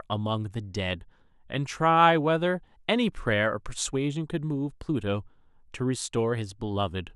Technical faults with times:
none

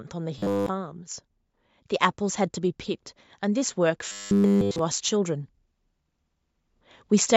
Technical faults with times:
0.38-0.69 robotic sound from repeated short buffers
3.41-5.46 automatic gain rising
4.09-4.79 robotic sound from repeated short buffers

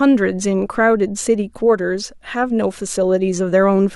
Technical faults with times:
none

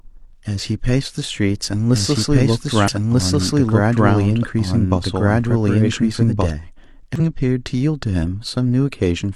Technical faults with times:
1.47-6.50 doubled audio track
2.84-2.88 damaged data in a compressed stream
7.16-7.20 damaged data in a compressed stream

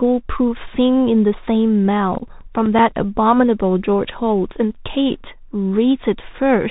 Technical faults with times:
0.00-6.71 Bluetooth CVSD headset codec
2.02-3.17 CD scratch ticks
2.19-2.23 unconcealed Bluetooth headset packet loss

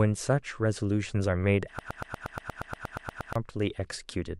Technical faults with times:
1.79-3.35 broken-record loop

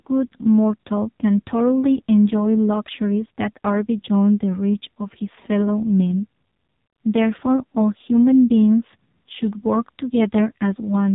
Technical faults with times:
0.00-11.14 AMR narrowband mobile codec

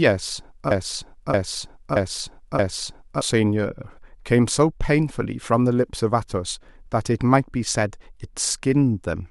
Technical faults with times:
0.71-3.22 broken-record loop

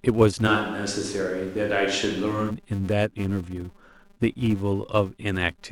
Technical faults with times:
0.00-5.71 filter restarted on every block
0.49-2.49 switch to a distant microphone

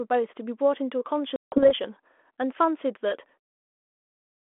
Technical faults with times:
1.36-1.71 packet loss on an ADPCM call

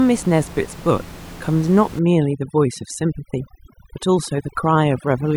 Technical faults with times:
1.99-5.36 overdone noise removal

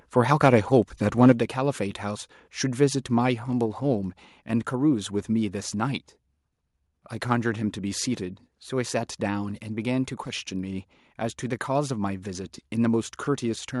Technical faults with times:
0.43-0.48 microphone overload
1.22-1.32 microphone overload
1.32 microphone volume stepped down
3.66 microphone volume stepped down

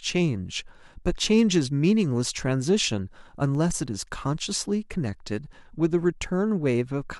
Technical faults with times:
3.55-3.86 CD scratch ticks

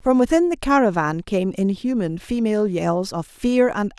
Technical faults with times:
none

